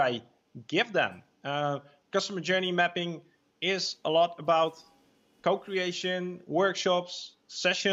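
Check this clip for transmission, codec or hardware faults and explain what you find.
Nothing stood out on listening to this clip.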